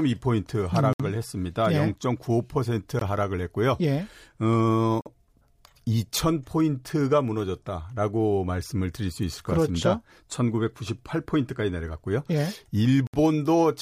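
Gaps between stream segments cut into this speech at 0.93 s (about 66 ms), 2.99 s (20 ms), 5.01 s (48 ms) and 13.07 s (67 ms). Each is a hard-edged hole of silence. The roughly two-second spacing points to 2-second segments whose timestamps don't quite meet, so the player pads the shortfall with silence at each boundary. Nothing is lost, but the timeline is stretched by the inserted silence.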